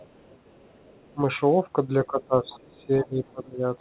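From 0.01 to 1.14 s the other side's voice is leaking through. The talker's loudspeaker is likely feeding the far end back into the microphone, and the echo canceller leaves a residue. It sits very faint, around 35 dB under the speech, as a second voice behind the talker. Where that stretch ends, from 1.14 to 1.19 s, comes the first speech suppressed in double talk. With both sides active, the canceller likely mistakes the talker for echo and pulls the level down briefly, by roughly 15 dB, a quick dip lasting about 50 ms.

The heavier case runs from 2.06 to 3.14 s. Suppression cuts the talker by up to about 25 dB in pieces adding up to roughly 0.7 s, so the speech dips and drops out in patches. Within that stretch the echo leaks through again at 2.46 to 2.59 s, now stronger, near 25 dB below the speech, and once more at 2.76 to 2.86 s, faint again at around 35 dB down. A final suppressed stretch from 3.31 to 3.63 s again sinks the talker by up to about 25 dB. 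Across the whole clip the narrowband call path caps the sound at 4 kHz.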